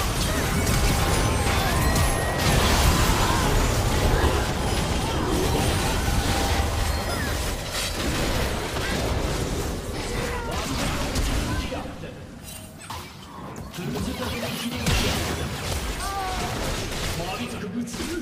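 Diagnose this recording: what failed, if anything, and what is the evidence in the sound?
The codec stage is the culprit: compressed frames skipped, six times. The sound jumps forward at 4.24, 6.35, 8.94, 12.79 to 12.82, 14.34 and 17.57 to 17.60 s, each time losing anywhere from a few tens of milliseconds up to about a tenth of a second. The jumps land on whole 10 ms frames that never got decoded.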